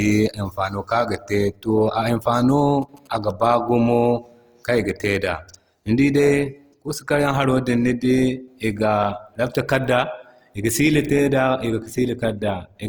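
A speech clip carrying plainly audible Opus compression throughout, likely from an encode in its CELT music mode at a low rate that fits roughly 24 kbps. The band stays full, reaching about 20.2 kHz, but with bits scarce the encoder fills bands with folded or noise content, so tonal parts of the voice come out rough and grainy. From 2.35 to 3.55 s GSM signalling bursts appear: a nearby 2G phone's short radio bursts are rectified by the audio circuit into a galloping pattern of short buzzes repeating at 216.7 Hz, sitting well below the speech.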